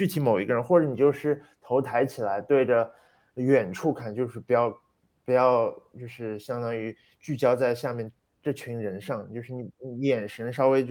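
No technical faults can be heard in the recording. The speech runs without any audible break or disturbance.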